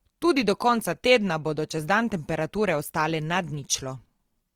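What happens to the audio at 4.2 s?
At 4.2 s the speech carries the grainy, rough, noise-filled texture heard throughout, likely Opus compression in CELT mode, consistent with about 24 kbps, band-filling thin detail with noise.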